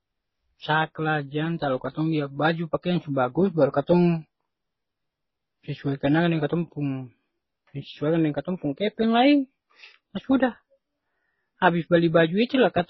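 Throughout the speech, a flat spectrogram ceiling at 5.8 kHz and the layered artefacts of two codecs point to likely transcoding between lossy codecs, low-bitrate HE-AAC then MP3.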